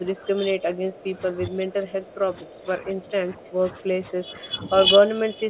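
A speech recording carried over a narrowband call path with nothing above 4 kHz, which fits a G.711-style codec. Speech is repeatedly ducked from 0.0 to 0.93 s, 1.12 to 2.99 s, and 3.29 s to the end, dipping by around 15 to 25 dB at its deepest. This is likely speech suppressed in double talk, where the echo canceller attenuates the near talker while the far side is also active.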